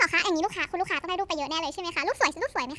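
Wrong sample rate throughout: the speech runs 1.5 times fast and sits 7 semitones high, fitting 16 kHz audio played unconverted at 24 kHz.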